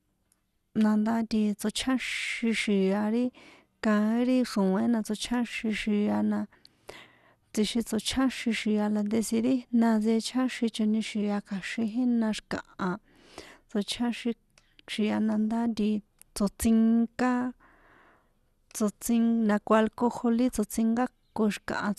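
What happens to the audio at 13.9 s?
MP2 compression is at work at 13.9 s, as throughout the speech: likely low-rate MPEG Layer II coding switches off upper sub-bands, leaving nothing above 12.1 kHz and a dull, gurgling graininess consistent with about 80 kbps.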